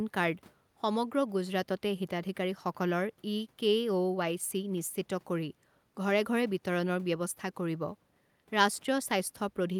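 Nothing in the speech stood out as a technical fault on listening.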